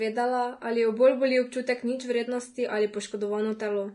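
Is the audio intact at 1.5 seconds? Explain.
No, not really. At 1.5 seconds, like the whole clip, the speech sounds hissy and grainy with nothing above 10.6 kHz, likely from Vorbis compression at something like 32 kbps, where coarsely quantised treble turns fine detail into noise and blurs attacks.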